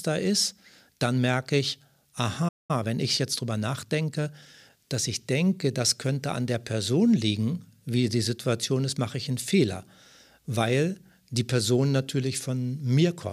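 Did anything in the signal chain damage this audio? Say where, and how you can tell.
Yes. A playback stall at 2.48 s: the speech cuts to silence for about 0.21 s, until 2.71 s, likely the player's buffer running dry, then resumes.

Time-compressed catch-up follows from 2.71 to 4.77 s, starting at "dass ich denke das": the player splices out fragments, running about 1.1 times fast at normal pitch.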